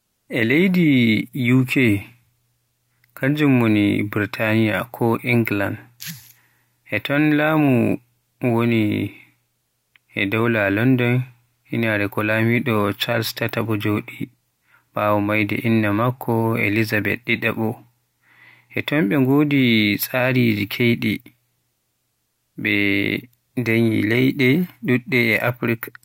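Listening closely to the speech, nothing stood out as a technical fault at any point.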